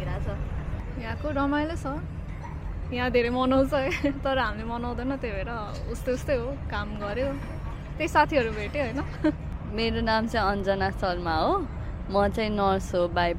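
Nothing here sounds off; the audio just runs along without a single glitch, dropout or odd moment catching the ear.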